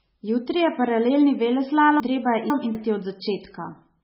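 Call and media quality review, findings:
Whole clip: watery, swirly speech, s sounds chirpy and metallic, nothing above 5.6 kHz. Likely MP3 compression at a starved bitrate, something like 16 kbps. Weak frequency lines flicker frame to frame and the treble is hard-cut.

2.0–2.75 s: jumbled stretch. Chunks out of order: a 250 ms chunk plays two slots late, after its successors. Nothing's dropped, but the sequence is scrambled across three hard joins. Check the jitter buffer or write path.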